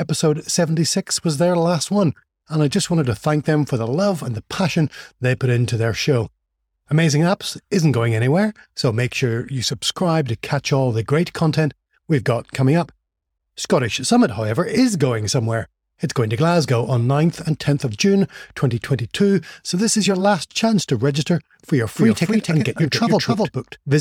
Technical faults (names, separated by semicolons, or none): doubled audio track